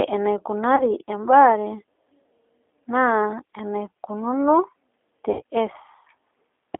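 G.729 codec damage runs through the whole recording. The speech fits an 8 kbit/s G.729A encoder, which discards the waveform and rebuilds each 10 ms frame from a vocal-tract filter, a pitch predictor and a handful of pulses. Nothing lies below about 300 Hz or above 3.5 kHz, so the sound is thin and telephone-like, and the coarse pulse modelling leaves a plainly audible rough, slightly synthetic edge on the voice.

VoIP packet loss concealed by the speech codec appears first from 0.76 to 0.83 s. About 20 ms of audio is missing, which points to a single lost packet. The decoder covers the hole by repeating its last pitch and filter at falling gain, giving a brief buzzy or noisy smear. The same fault returns from 5.31 to 5.43 s with 80 ms missing, which fits about four consecutive packets. This longer gap stretches into a fading tone or noise, and the voice stays weak or distorted for a moment after audio resumes.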